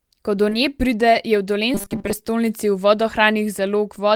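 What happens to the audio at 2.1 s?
Robotic sound from repeated short buffers runs from 1.74 to 2.13 s. The speech becomes a rigid, metallic 200 Hz buzz, likely from 5 ms buffers being repeated.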